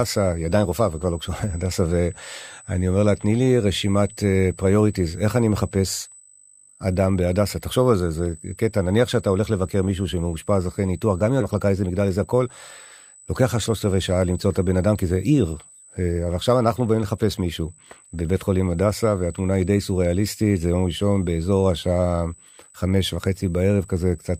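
Running under the whole clip there's a thin, steady USB whine right at 8 kHz, sitting about 25 dB below the speech. That's current drawn in the bus's 125-microsecond microframes leaking in through power or ground, so the pitch stays fixed and never wanders.

At 11.41 to 11.43 s the speech does a skip ahead: roughly a second of audio just isn't there, and the two sides are butted together with no gap at all. It's what you get when the buffer drops a chunk while later audio is already queued.

Straight after, from 11.51 to 12.48 s, there's a jitter buffer speed-up. The receiver is trimming its backlog by cutting out short pitch-period slices over and over, around 150 ms in total. The speech runs at about 113% speed without any pitch change, so it comes across as briefly hurried.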